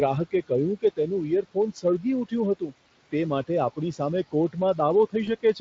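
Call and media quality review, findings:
Noise suppressor artifacts, throughout. Room noise about 20 dB under the speech, pulled down about 16 dB between phrases, returning under speech. Frame-wise band gating of the noise.

Speech cut by the noise suppressor, 1.74–2.05 s and 2.55–2.73 s. Drops of about 15 dB and about 18 dB, roughly a tenth of a second each. Soft speech misread as noise and swallowed.

VoIP packet loss concealed by the speech codec, 5.25–5.29 s. Brief fading smear. The gap fits one lost 20 ms packet, which the Speex decoder extrapolates from the previous frame before recovering.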